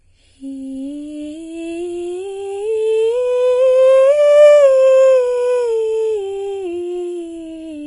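From start to end, the music carries what is likely Vorbis compression at a low bitrate, somewhere near 28 kbps. Nothing survives above about 10.6 kHz, and the treble that remains is quantised so coarsely that its fine detail turns into hiss-like noise, leaving tones roughened and grainy and attacks smeared. On a spectrogram this shows as a hard flat ceiling at 10.6 kHz with speckled, blotchy energy just beneath it.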